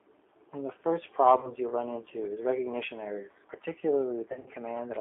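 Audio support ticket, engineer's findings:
G.729 codec across the whole clip. Band-limited to roughly 300 Hz to 3.5 kHz, nothing on top. Speech rough, slightly synthetic. Fits an 8 kbit/s G.729A stream. Damage plainly audible throughout.
Mechanism: each 10 ms frame rebuilt from a vocal-tract filter, pitch predictor and a few pulses, so fine detail gets lost. Probable component: the VoIP leg's codec.

VoIP packet loss concealed by the speech codec, 1.40 to 1.53 s. Short smear that fades. Sounds like about 30 ms of audio missing. Decoder's concealment is stretching the last pitch and filter and dropping the gain.

Same fault, 4.32 to 4.50 s, worse. Lost audio scattered over about 140 ms, longest gap around 60 ms. Stays weak a bit after packets come back because frames build on each other. Check network jitter or loss on that leg.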